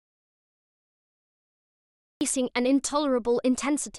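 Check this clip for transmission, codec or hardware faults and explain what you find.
One fault is present: an audio dropout to silence at the start. The clip opens in silence, and that silence lasts until 2.21 s. There is no room tone, hiss or background in the gap, only silence. The speech then starts abruptly mid-flow. The likely cause is a lost input, such as a disconnected device, a failed link or a stray mute, while the recorder kept writing. Whatever was said before 2.21 s is gone.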